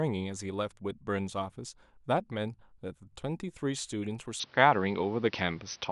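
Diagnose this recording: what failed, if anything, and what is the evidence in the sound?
At 4.40 s the speech abruptly loses everything above 6.1 kHz, shifts in level by about 5 dB and gains a new noise floor roughly 35 dB down, with no gap. That points to a driver-level change, likely an input switched to a poorer device, not a codec bandwidth drop, which would keep the same noise.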